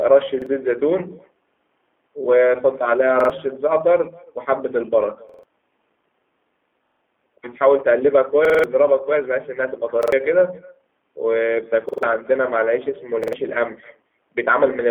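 Throughout, an echo with no canceller returns the speech from a far-end loudspeaker about a third of a second later, a faint shadow about 26 dB down. The G.729 codec rebuilds speech from a filter model, leaving it rough and synthetic and confined to roughly 250 Hz to 3.4 kHz, consistent with an 8 kbit/s codec. At 0.42, 3.20, 5.29, 6.87, 8.45, 10.03, 11.89 and 13.24 s a repeated buffer occurs: audio arrived late, so the last 46 ms chunk, which fits a 2048-sample buffer, sounds two to five times as a hard-edged stutter.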